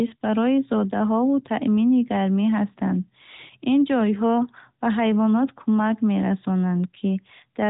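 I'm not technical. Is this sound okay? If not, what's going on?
Yes, nothing has gone wrong with this speech. It has the narrow, phone-call sound of the AMR narrowband mobile codec, which keeps nothing above 3.8 kHz.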